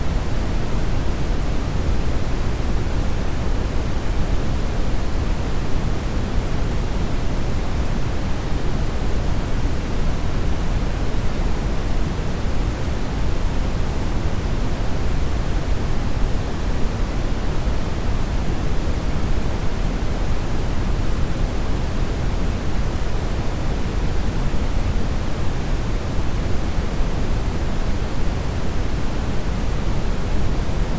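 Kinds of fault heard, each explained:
No kinds of fault are heard in this audio.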